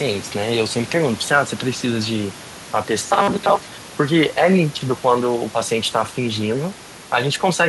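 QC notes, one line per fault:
3.00–3.78 s, robotic sound from repeated short buffers: speech turns into a rigid metallic 200 Hz buzz, likely from a 5 ms chunk replayed for most of the span while fresh audio lagged. Spectrogram shows flat harmonics at 200 Hz multiples. Waveform shows identical repeating cycles.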